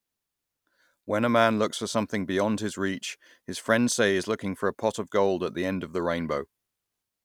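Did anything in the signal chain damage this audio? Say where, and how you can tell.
No, nothing in the signal chain audibly damaged this speech recording, and there is no sign of a problem at any stage.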